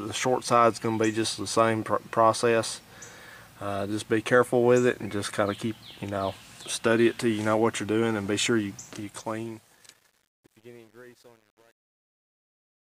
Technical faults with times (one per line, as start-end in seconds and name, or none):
8.92-13.00 truncation distortion on a fade